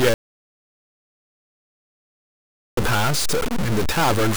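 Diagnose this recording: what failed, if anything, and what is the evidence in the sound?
Distortion runs through the whole clip, even into pauses. Likely a stuck bit at the converter, offsetting about half the samples.

From 0.14 to 2.77 s the sound falls to dead silence, no room tone. An audio dropout to silence, likely a lost input link, drops 2.63 s.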